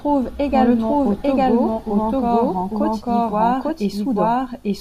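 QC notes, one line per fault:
Throughout, doubled audio track: the speech plays again about a second later at roughly the same level, dry and full-band, likely from a second capture path running behind.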